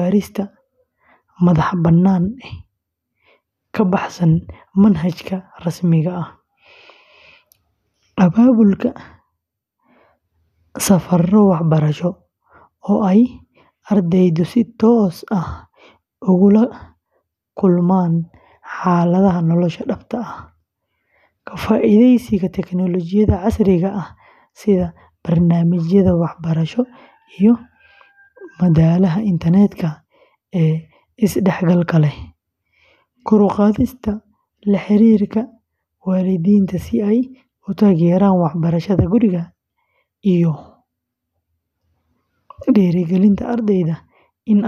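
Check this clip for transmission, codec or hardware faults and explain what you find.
Listening to the speech in this clip, nothing stood out as a fault.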